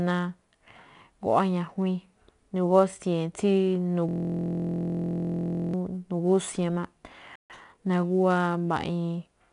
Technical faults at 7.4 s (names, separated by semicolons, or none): 4-bit ADPCM compression; playback stall; time-compressed catch-up